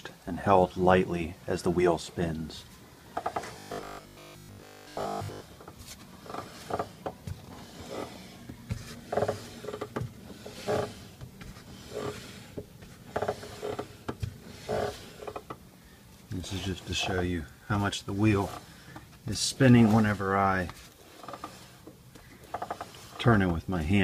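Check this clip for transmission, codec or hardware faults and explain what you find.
One fault is present: robotic sound from repeated short buffers, from 3.59 to 5.41 s. The likely cause is audio arriving too slowly for playback, so the software fills each gap by replaying the most recent fragment, here about 20 ms long, while the real audio in between is lost. Most of the stretch is made of these repeats, which impose a steady 50 Hz buzz and turn the sound rigid and metallic for nearly two seconds.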